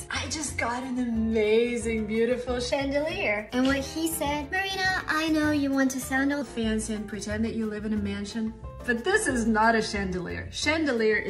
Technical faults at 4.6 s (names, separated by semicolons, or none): section at the wrong speed